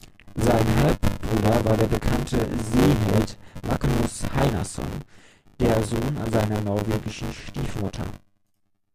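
The playback software and the audio hardware have slipped out of step on a shared ring buffer, so the writer and reader cross inside every period throughout this speech recording. That is buffer tearing: roughly a fifth of each buffer still holds audio from about 20 ms earlier, spliced in with hard joins at both ends. The result is a robotic buzz at 100 Hz, which points to a buffer period of about 10 ms, heard wherever the speech is present.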